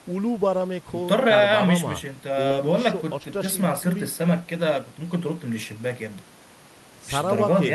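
At 2.47 s to 2.52 s the speech briefly smears, a short concealed packet loss. About 20 ms of the stream arrived too late for the decoder, so the receiver patched roughly 22 ms by extending the preceding sound and then crossfaded back into real audio. What separates this from a plain dropout is that there is no silent hole or hard click. The gap is papered over, leaving a wobble where detail went missing.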